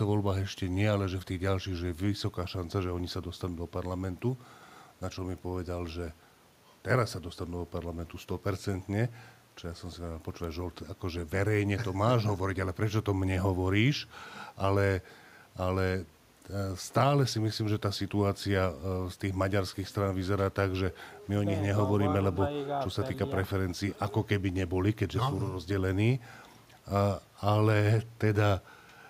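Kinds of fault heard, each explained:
No technical faults can be heard in this recording.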